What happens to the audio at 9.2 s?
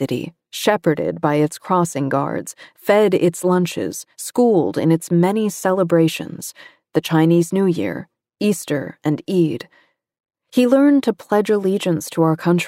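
Nothing goes wrong at 9.2 s; the speech runs on intact through that moment, with no dropout, click, distortion or other fault.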